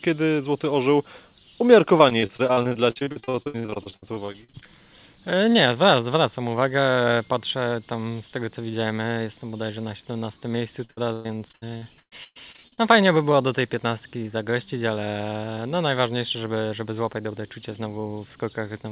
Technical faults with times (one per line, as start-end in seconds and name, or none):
1.98-4.67 repeated packet loss (robotic sound)
10.85-12.79 repeated packet loss (robotic sound)